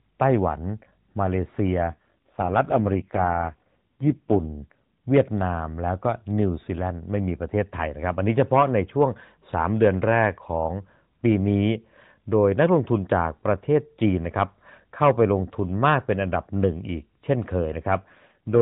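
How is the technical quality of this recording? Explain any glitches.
The recording is narrowband mobile-call speech, with the band ending near 4 kHz, consistent with the AMR-NB codec at its 12.2 kbps rate, and it has two AMR rate drops. From 1.92 to 5.06 s and again from 18.04 s to the end, the voice turns buzzier and more synthetic. This fits the network pushing the codec from 12.2 down to 4.75 kbps to protect a weak link. On a spectrogram the band keeps its 4 kHz ceiling and the waveform shows no gap, but the harmonics look smeared and coarser during both stretches.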